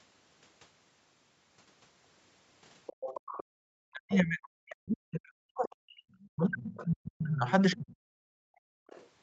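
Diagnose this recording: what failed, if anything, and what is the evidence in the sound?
Other side's voice leaking through, at 2.86–3.44 s, 3.94–4.47 s, 6.77–6.85 s, 7.50–7.94 s and 8.87–9.08 s. A second, fainter voice sits under the talker, roughly 10 to 30 dB down. It is strongest in the 3.94 s scrap and fades to a trace by the last one. This stage is call processing: the loudspeaker's output reached the microphone, and the echo canceller likely failed to model and subtract all of it.

Speech suppressed in double talk, from 3.59 to 6.02 s and from 6.36 to 7.97 s. The talker's level repeatedly collapses, by something like 40 dB at the deepest, over about two seconds and one and a half seconds in total. These dips coincide with the far-end voice. Both sides were active at once, and the echo suppressor likely could not tell near speech from echo, so it attenuated everything.

Background gated by the echo canceller, from 8.25 to 8.87 s. 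The room tone drops by about 40 dB for roughly 0.7 s and returns at 8.87 s, just as the last echo scrap starts. The canceller's suppressor clamped the microphone path while the loudspeaker was driving it. The call's normal band limit is audible throughout, with nothing above 8 kHz.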